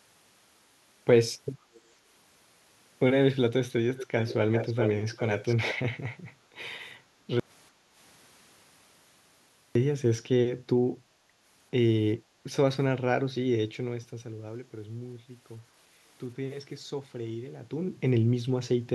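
Speech, with three kinds of fault in the first ten seconds. Delayed copies of the talker appear at 1.73–1.81 s, 3.96–4.34 s, 4.51–4.91 s and 5.16–5.75 s, arriving roughly 0.46 s and then 0.40 s late, from very quiet to nearly as loud as the direct speech. This is likely an echo leak from a loudspeaker-side canceller letting residual pickup through. Background gated by the echo canceller shows as brief room-tone dips of about 6–7 dB at 6.40–6.50 s, 7.03–7.27 s and 7.71–7.96 s, where the canceller clamped the microphone and then released it. An audio dropout to silence runs from 7.40 to 9.75 s, a 2.36 s stretch of silence with no room tone, most likely from the input being lost while silence was still written.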